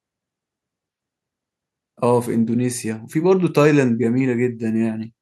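Speech recording, no audible faults.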